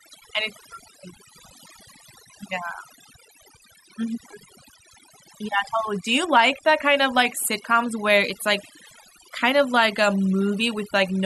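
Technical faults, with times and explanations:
Throughout, overdone noise removal: the background drops and breaks up into twinkling specks. Unlike a low-pass filter or bandwidth limit, the loss is patchy. Individual bands vanish wherever they sit near the noise estimate, so quiet speech detail disappears along with the noise.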